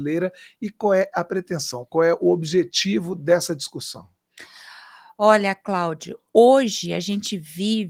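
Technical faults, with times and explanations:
No technical faults are heard in this clip.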